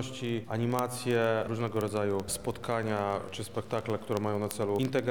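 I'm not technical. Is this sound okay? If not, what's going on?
No. From about 0.11 s right to the end there's a fast, steady ticking behind the sound, roughly fifty sharp little clicks every second, some louder than others, around two hundred in all. These are word clock ticks. The sound passed over a digital cable between two devices whose internal clocks weren't synchronised, here differing by roughly a thousandth. Each time they drift apart by one sample, a single sample is dropped or doubled, and that tiny jump is the tick.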